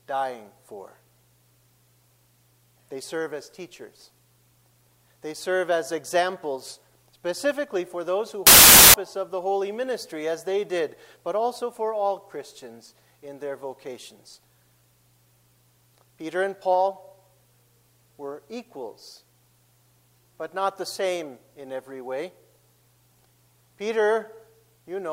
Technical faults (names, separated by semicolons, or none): wrong sample width